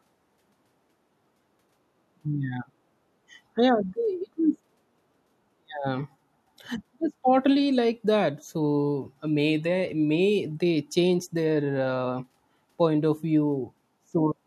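Speech recording with no technical faults to report. Nothing audible points to a problem anywhere in the recording or playback chain.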